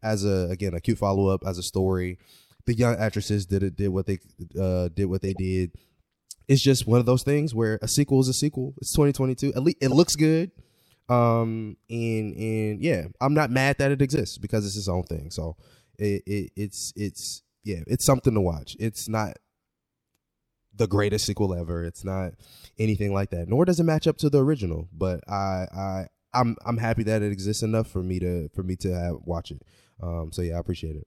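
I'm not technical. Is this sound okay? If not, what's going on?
No, not quite. Three brief glitches come from a corrupt frame decoded: parts of the compressed audio got damaged, and the player played them anyway instead of skipping them. At 5.28 to 5.39 s, right after "they uh did what", there's a quiet blip lasting a few frames. At 9.91 s, after "least it", a sharper squeak. At 14.16 s, between "not mad that it" and "because it's its own", the loudest chirp of the three.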